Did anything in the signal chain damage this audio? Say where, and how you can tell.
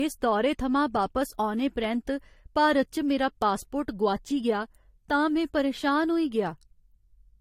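Yes, at the codec stage, across the whole clip. The speech carries two different kinds of compression smear layered together, with nothing above 16.5 kHz. That points to transcoding between lossy codecs, likely an AAC encode near 48 kbit/s re-encoded to Vorbis, each pass adding its own artefacts.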